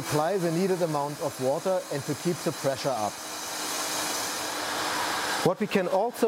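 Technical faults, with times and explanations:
No technical faults are audible.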